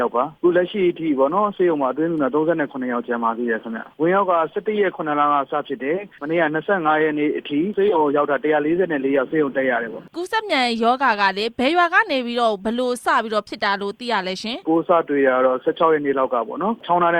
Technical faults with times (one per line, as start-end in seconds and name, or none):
7.68-17.19 resampler restarted on every block